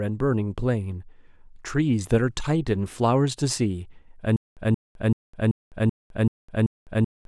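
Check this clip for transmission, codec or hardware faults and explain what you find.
One fault is present: a stutter with silent gaps from 4.36 s to the end. The stream likely stalled, so a 176.5 ms fragment of speech replays seven times, each followed by about 207 ms of digital silence, repeating every 383 ms while the following audio is lost.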